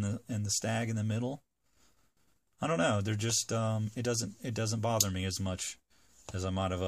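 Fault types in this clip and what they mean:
Clock slip clicks: A fast, even tick, roughly 25 a second, runs almost the whole way through, from 0.14 to 6.84 s, some 150 in all, so it reads more like a fine rattle than separate clicks. Each one is a single sample dropped or doubled, likely because two devices are running on unsynced clocks that drift apart by around 500 ppm, slipping a sample every time the gap adds up to one.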